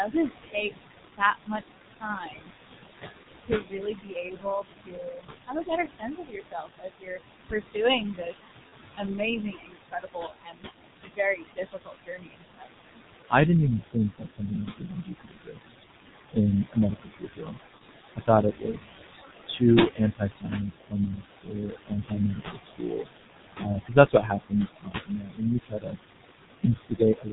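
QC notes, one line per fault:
Throughout: noise suppressor artifacts. The room noise, only about 6 dB under the speech, gets pulled down by about 18 dB in the gaps and comes back up under the talking, so the background pumps.
Throughout: G.723.1 codec. It's heavily damaged, muffled with nothing up top past 4 kHz, hoarse, and consonants smeared together. That low-rate, slow-updating sound points to the 6.3 kbit/s mode, and the coarse voice model just can't keep up with fast changes.
0.05–2.51 s, 3.39–13.33 s, 13.93–17.58 s, 18.16–27.33 s: speech cut by the noise suppressor. The suppressor mistakes quieter speech for noise and ducks it by up to about 21–22 dB, so endings and soft consonants go swallowed. That's roughly 1 s, 5 s, 2 s and 5 s of affected speech across these stretches, with the cut runs sitting either side of "didn't even".
3.23–3.27 s, 8.69–8.75 s, 17.79–17.83 s: VoIP packet loss concealed by the speech codec. 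Each one is a short patch where the decoder stretched its last pitch and filter and faded the gain. The length fits a single lost 30 ms frame, and the voice stays a bit off just after.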